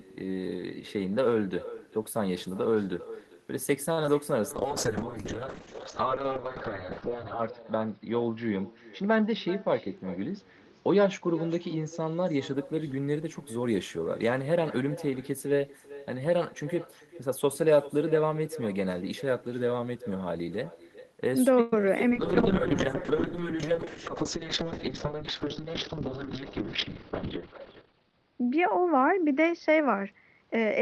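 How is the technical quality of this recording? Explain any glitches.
The recording has several call-transport faults: a constant echo, brief stalls and dropouts, two long stretches of low-bitrate coding, and two passages that run slightly fast.

Echo with no canceller, throughout: the far end's loudspeaker sound is picked up by its microphone and returned uncancelled. A thinner copy trails the speech by roughly 0.4 s at about 17 dB down, faintly doubling the talker's voice.

Short stall from a late packet, 3.92–3.98 s: a packet arrived late and the jitter buffer ran dry. The receiver held the last sound for 49 ms, then resumed from the same point. The result is a brief drawn-out moment with a slight buzz, and nothing is lost.

Short concealed packet loss, at 4.03 s, 4.06–4.08 s and 21.81–21.84 s: about 10 ms of audio never arrived each time. The decoder bridged each gap by extending the preceding sound and blending back in, so each one comes through as a tiny smear or wobble.

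Call bitrate drop, 4.51–12.61 s and 22.11 s to the end: a falling bandwidth estimate pushed the encoder from 32 kbps down to 6 kbps, bottoming out for about 2.9 s and 3.2 s. The upper limit shrinks from 20 kHz to 6 kHz, so speech turns muffled, rough and watery.

Jitter buffer speed-up, 9.01–10.04 s and 23.72–26.44 s: the buffer held excess delay, so the receiver repeatedly cut out pitch-period-sized slivers, about 50 ms and 150 ms in total. Speech plays 4% faster at unchanged pitch.

Call audio freeze, 21.61–21.73 s: the sound stops advancing for 116 ms and the last sound is held as a fading buzz or hiss before continuing from where it stopped. The likely cause is packets delayed in transit, which emptied the jitter buffer.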